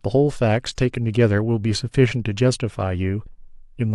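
A speech recording in which the decoder skipped compressed frames near the end: at 3.25 s, roughly two frames of 23.2 ms each went unplayed, either missing from the file or rejected as damaged. The playback therefore leaps forward by around 50 ms, and a sliver of the speech simply vanishes at that point.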